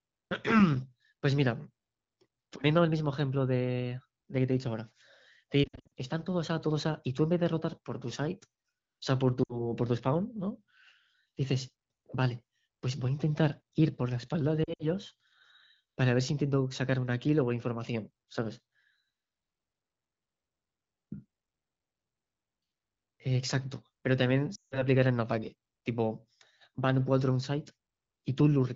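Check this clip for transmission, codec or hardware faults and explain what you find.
Lost AMR speech frames at 5.63–5.93 s, 9.44–9.70 s, 14.64–14.86 s and 24.55–24.83 s. Radio errors corrupted frames, so the wideband decoder repeated its last good parameters at falling gain. The speech smears, dips briefly or quickly fades out, then returns rough for a moment. Losses of 160 ms in a row are the longest stretches. Under the dropouts, the AMR-WB coding at 15.85 kbit/s sounds clear.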